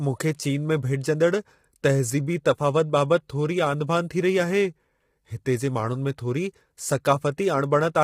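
From start to finish, the speech sounds rough and grainy. Noise fills the gaps between harmonics, and the top band sounds thin and synthetic. This is likely low-delay AAC compression. Its short frames resolve pitch poorly, and the heavy damage fits a bitrate near 24 kbps.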